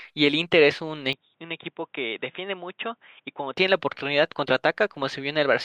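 Speech, and from 1.13 s to 3.57 s it suddenly turns dull and boxy, with nothing above 3.8 kHz, roughly 10 dB quieter, and carrying a faint background noise of its own, before clearing again. This points to the input likely having switched to a poorer device. A bandwidth drop from a codec would not shift level or noise floor too. Here the change is abrupt, with no gap at the switch.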